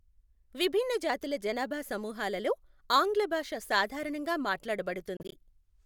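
From 5.17 to 5.33 s the speech breaks up into several short silences, totalling about 76 ms and the longest about 30 ms. This is likely a Bluetooth dropout, with late packets discarded before reaching the headphones, and speech resumes as though it had continued underneath.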